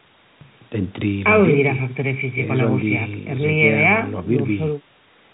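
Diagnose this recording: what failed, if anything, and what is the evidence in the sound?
Nothing failed; the chain behaves as expected throughout.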